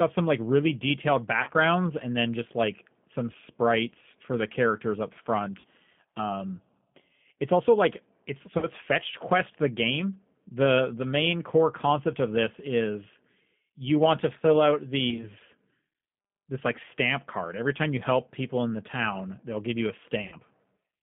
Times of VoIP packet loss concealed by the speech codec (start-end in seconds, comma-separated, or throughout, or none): 1.43-1.51, 5.60-5.66, 8.58-8.68, 15.10-15.26, 20.28-20.35